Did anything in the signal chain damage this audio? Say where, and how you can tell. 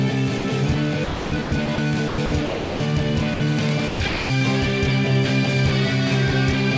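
Yes. At 0.38 to 0.44 s and again at 3.34 to 3.40 s, about 60 ms of sound vanishes and is replaced by a short patch of steady, featureless hiss before the real signal resumes. This is sound dropped by the voice detector at the call-processing stage: the sender's detector most likely mistook quiet material for background, stopped transmitting, and the receiver filled the gap with synthetic comfort noise.

Three longer stretches sound choppy: 1.04 to 1.78 s, with about 420 ms replaced; 2.08 to 2.80 s, about 500 ms; and 3.88 to 4.30 s, about 340 ms. This is sound chopped by the voice detector, again in call processing. Its likely cause is the detector toggling between sending and muting more than once in each stretch, so quiet portions and edges were swapped for comfort noise. Throughout, nothing is audible above 8 kHz, which points to a G.722 call codec at around 64 kbps.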